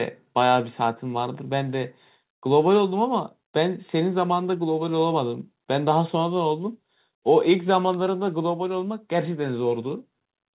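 No technical faults occur anywhere in the speech, which comes through a G.711 mu-law call path at 64 kbps with nothing above 4 kHz.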